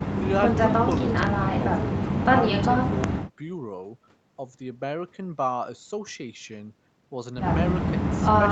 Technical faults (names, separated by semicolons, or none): none